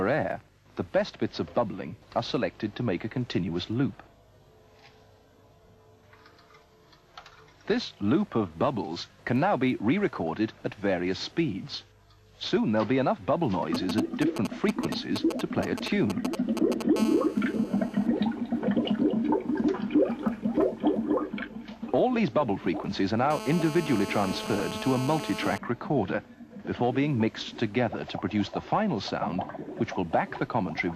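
DAB burbling at 10.01–10.22 s, 12.38–12.57 s, 15.50–15.65 s and 24.23–24.61 s comes from weak reception letting bit errors corrupt MP2 frames, so individual sub-bands jump in level. GSM signalling bursts from 13.75 to 16.82 s are a galloping pattern of short 217 Hz buzzes, about 5 dB below the signal, from a nearby 2G phone's intermittent transmissions being rectified in the audio circuit. GSM phone buzz from 16.96 to 18.06 s, about 15 dB below the signal, and from 23.31 to 25.58 s, about 10 dB below, is a steady raspy 217 Hz tone rich in harmonics, from in-call radio pulses rectified the same way.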